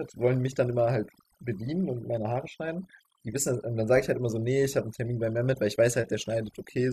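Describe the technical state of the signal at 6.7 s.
At 6.7 s the speech carries overdone noise removal, present across the whole clip. The noise reduction was set too hard, so frequency bands near the noise level are pulled down or cut. Quiet parts of the voice vanish with them. The background drops and breaks up into twinkling specks.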